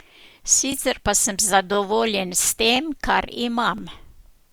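A speech clip with overlapping chunks: every 1.0 s, a 20 ms slice of audio plays twice, at 0.72–0.74 s (just before "pa sem"), 1.74–1.76 s (just after "pa sem"), 2.76–2.78 s and 3.78–3.80 s. Each chunk begins before the previous one has finished, so the join is heard as a brief stutter or click. On a waveform, each join shows a short repeated cycle pattern with a step discontinuity. On a spectrogram, it appears as a thin vertical broadband line, evenly spaced at one-second intervals.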